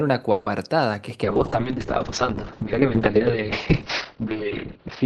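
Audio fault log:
0.31–0.47 s, call audio freeze: packets were likely held up in transit and the jitter buffer ran dry, so the receiver stretched the last sound into a fading buzz or hiss for about 150 ms. The speech then resumes where it stopped, a gap inserted with nothing lost, leaving playback 150 ms later.
1.25 s to end, call bitrate drop: the bandwidth estimate fell and the encoder went from 64 kbps to 7 kbps, holding the lowest rate for about 2 s. Coarser coding makes the speech rough and watery, and the audio band shrinks from 20 kHz to 6 kHz, muffling it.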